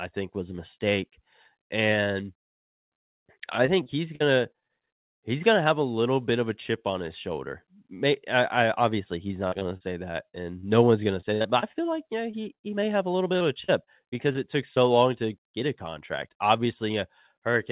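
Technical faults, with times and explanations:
3.66–4.71 s, repeated packet loss (robotic sound): six gaps totalling about 140 ms, the longest 45 ms, covering 13% of the stretch before "he's gonna have a". Each hole is bridged by extending the last sound, and the next one arrives quickly, so the speech turns choppy with pieces missing.
9.47–14.78 s, repeated packet loss (robotic sound): the same failure over a longer stretch, starting after "I I obviously he's" and ending before "long to get a". There are 25 gaps, about 560 ms in total and up to 61 ms each, covering 10% of the span. The repeated patching of the gaps keeps the sound stuttering throughout this section.
15.42–15.46 s, short concealed packet loss: about 20 ms failed to arrive between "long to" and "get a contract". The receiver continued the preceding sound through the gap and blended back into the real signal. The result is a brief smear, heard within the G.711 call band that stops at 4 kHz.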